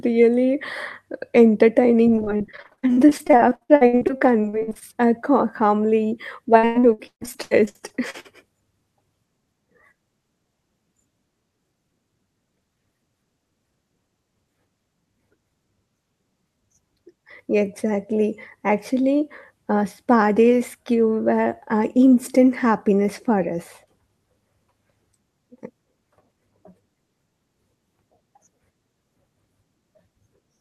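From 2.15 to 4.83 s and again from 6.57 to 8.26 s, the speech shows repeated packet loss (robotic sound). Short gaps in the stream, the longest 64 ms and then 139 ms, are patched by extending the preceding sound, covering roughly 37% and 43% of each stretch. The result is choppy speech with pieces missing.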